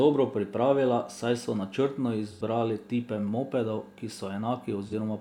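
At 2.31 s the speech turns briefly smeared and phasey for about 85 ms, ending around 2.42 s, and a shorter, similar blur of about 43 ms follows at 4.87 s. Both are AAC frame loss with concealment. Compressed frames went missing, which fits two lost frames and then one, and the decoder filled each gap by reusing the last good spectrum with altered phase and energy. The result is a noisy patch rather than silence.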